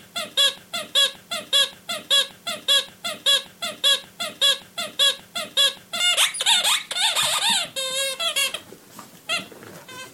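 The clip is of sounds, with a broken-record loop from 0.58 to 6.0 s. A fragment of about 0.58 s repeats exactly, back to back, nine times. The sound that belonged there is lost. The likely cause is a stalled player, encoder or stream resending its last buffered piece.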